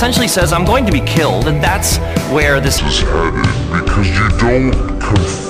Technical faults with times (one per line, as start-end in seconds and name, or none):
2.78-5.50 section at the wrong speed